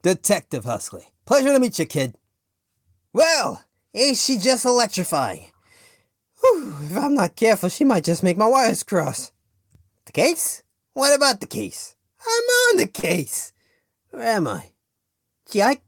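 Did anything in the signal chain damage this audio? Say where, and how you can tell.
Yes. A short concealed packet loss at the network stage runs from 12.99 to 13.05 s. About 40 ms of audio arrived too late for the decoder or never arrived, and concealment filled roughly 36 ms of that gap by extending the preceding sound before cross-fading back into the received stream. It is heard as a brief smear in the sound at that point, a synthetic stretch where the real signal should be.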